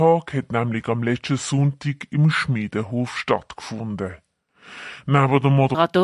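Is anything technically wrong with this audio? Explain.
Yes. From 0.0 to 5.75 s the speech sounds low and dragged, about 5.5 semitones down at 0.73 times normal speed. This is a wrong sample rate, consistent with 44.1 kHz audio played at 32 kHz without conversion.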